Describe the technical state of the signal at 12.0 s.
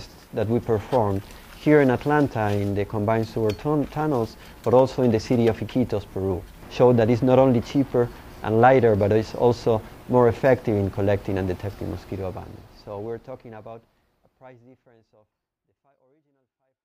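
The signal is intact at 12.0 s, with the level just beginning a smooth, deliberate fade-out at around that point and no click or hard edge.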